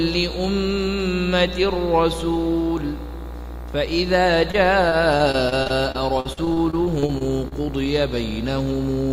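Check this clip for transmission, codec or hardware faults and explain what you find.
One transmission fault is present: repeated packet loss (robotic sound), from 4.51 s to 7.53 s. Over these three seconds the stream keeps dropping data. Each hole is bridged by extending the sound just before it. The next hole arrives soon after. The sound points to around eighteen gaps, the longest 46 ms, with about 14% of the stretch patched. The result is choppy, with small pieces of sound missing.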